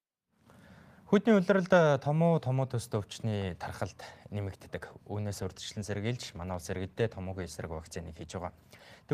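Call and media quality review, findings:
Call bitrate drop, 5.35 to 8.65 s. Speech turns coarse and rough, fitting an encoder cut from about 32 to 18 kbps after a falling bandwidth estimate. Worst for about 3.2 s. Encoder-side: the degradation is continuous, with no gaps, clicks or concealment warble, which rules out packet loss.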